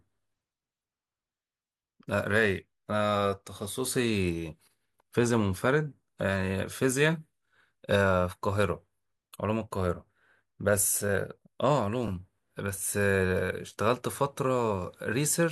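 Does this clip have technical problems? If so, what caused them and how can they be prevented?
Yes. Repeated frames occur at 12.07 to 12.10 s, where a short block of about 26 ms plays twice in a row and produces a brief stutter in the speech. A stretch of the compressed stream was written or sent a second time, so the decoder rendered the same slice of sound again. That matches a single compressed frame of about 26 ms, and the clip is 26.1 ms longer than it should be. Prevent this by checking frame sequence numbers or timestamps during writing and transmission and discarding any duplicate before decoding.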